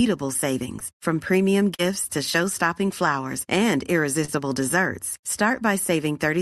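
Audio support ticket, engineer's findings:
Short concealed packet loss at 0.79–0.83 s, 1.75–1.81 s and 4.25–4.30 s. Brief smears and wobble, each 20–40 ms of missing audio. Jitter buffer concealment extrapolated the prior pitch and noise, then crossfaded back. Unlike a hard dropout, there is no silent gap. The audio is band-limited near 12 kHz, consistent with Opus at roughly 64 kbps.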